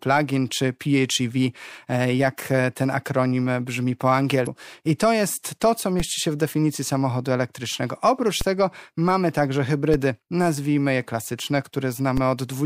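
Damaged data in the compressed stream appears from 4.43 to 4.47 s, just after "ten akronim brzmi po" and before "I to jest to". Corrupted bytes there leave the decoder misreading frames and hunting for the next valid header, which produces a brief chirp, squawk, click or short hole in the speech.

DC steps follow at 6.00 s (between "to jest to co" and "się w definicji samochodu"), 8.41 s (right before "tego mamy także"), 9.94 s and 12.17 s. At each point the waveform's zero line abruptly shifts, producing a low thump or click while the speech continues. The offset then fades away, consistent with a high-pass around 20 Hz draining it off.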